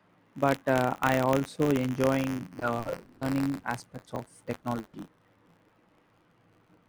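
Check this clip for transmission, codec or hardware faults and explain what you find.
Several transmission and hardware faults are present in this speech clip: a continuous buffer fault plus packet loss in four places.

Buffer tearing runs throughout. A steady robotic buzz near 93.8 Hz rides on the speech wherever there is signal. The output's ring buffer is being read where it's being written, so a small slice of each period, a few percent, replays audio from a few tens of milliseconds earlier. That rate fits a 512-sample buffer.

Short concealed packet loss occurs at 1.63 to 1.68 s and again at 4.59 to 4.66 s. Each is a brief smear or wobble, 20 ms and 40 ms respectively. The packets arrived too late or not at all, and the decoder extended the preceding sound before blending back.

A lost packet rebuilt from error correction sits at 1.65 to 1.67 s and again at 4.93 to 4.95 s. Each is a 20 ms patch that sounds rougher and grainier. 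A reduced-quality copy carried in the next packet filled the gap. That copy lacks high frequencies, so the decoder estimated them.

Repeated packet loss (robotic sound) covers 2.59 to 3.66 s. Speech there turns choppy, with pieces missing. Four separate gaps total 300 ms, the longest 180 ms, so over a quarter of the stretch is concealment. A small part was recovered from error correction, and the rest was extrapolated each time.

A burst of packet loss hits at 4.79 to 4.96 s. For 140 ms the sound holds as a buzz or fading hiss with no true silence, then speech resumes further on. Several consecutive packets were lost, so the decoder kept continuing and attenuating the last sound until real audio returned.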